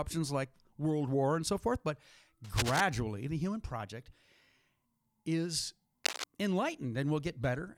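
At 2.44 to 2.81 s, between "and so forth but" and "the human project", a burst of cable scratch noise rasps over the speech, a little below it in level. A second, shorter burst at 6.04 to 6.24 s is roughly as loud as the speech itself. Both are likely a worn lead or connector being moved, its contact flickering. On a spectrogram they appear as ragged broadband smears. The waveform shows dense, jagged spikes.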